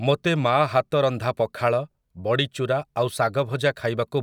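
No technical faults can be heard anywhere in the speech; the signal holds steady throughout with no disturbances to its level, timing or continuity.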